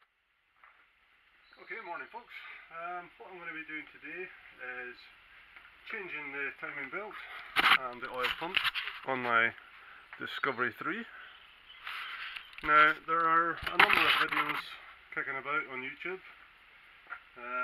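No dropouts, clicks, distortion or timing breaks turn up anywhere in the audio.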